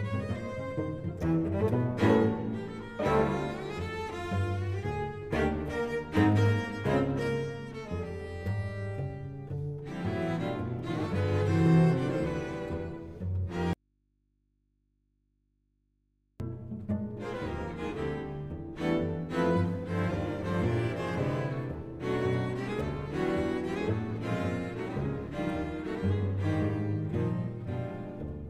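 Audio dropout to a faint residue, 13.73–16.40 s: the sound snaps off to mains hum around 45 dB down, likely a lost feed into a still-live input.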